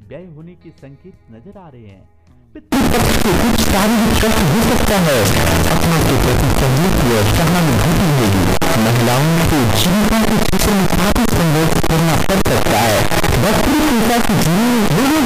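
From 2.72 s to the end of the clip at 15.25 s, the audio jumps to a very loud, harsh, buzzing level. This is float read as integer: the sound was likely written as 32-bit float samples and read back as 32-bit integers. Each sample's sign and exponent bits then set its value, so the waveform becomes nearly square at an almost fixed, high level regardless of the original level. Background noise comes up as loud as the main sound, though its pitch can still be followed.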